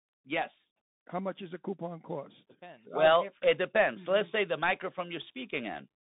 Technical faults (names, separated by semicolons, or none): Bluetooth CVSD headset codec